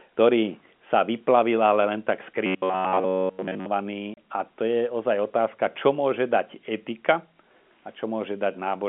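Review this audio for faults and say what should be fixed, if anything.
Audio arriving too seldom, likely a starved playback buffer, made the software repeat its last roughly 10.7 ms chunk for most of the span from 2.46 to 3.66 s. That is robotic sound from repeated short buffers: a rigid metallic buzz near 93.8 Hz. Keeping the receive buffer deep enough to absorb delivery gaps would prevent it.

Packet loss filled with silence at 4.14 s left a 30 ms hole, which points to a single lost packet replaced by silence. The sound cuts off and resumes abruptly. Adding loss concealment that interpolates across missing packets would prevent it.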